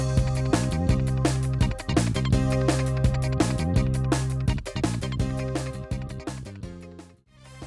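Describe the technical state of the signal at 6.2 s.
At 6.2 s, as throughout, a wrong sample rate plays the sound 1.5 times too fast and about 7 semitones high, which fits 16 kHz audio played at 24 kHz. The waveform looks compressed in time, and spectrogram features sit 1.5 times higher, reaching up to 12 kHz.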